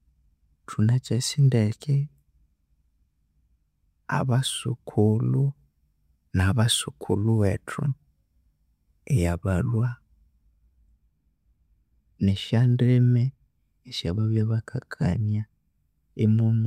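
No technical faults can be heard anywhere in the speech recording, with the signal holding steady throughout.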